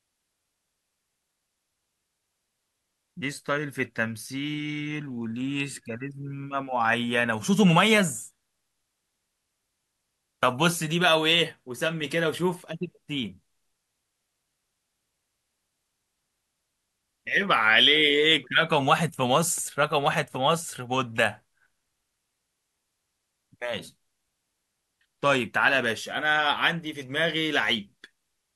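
A speech recording with no technical faults to report. Nothing heard in it points to a problem in how the audio was captured, processed or delivered.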